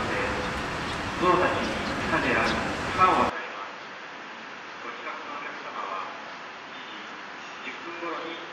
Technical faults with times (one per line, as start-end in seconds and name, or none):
3.30-8.52 input switched to a poorer device